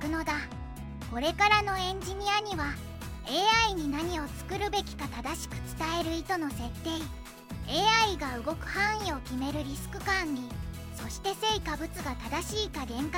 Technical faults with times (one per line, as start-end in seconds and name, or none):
6.01 dropped buffer (overrun)
10.62 dropped buffer (overrun)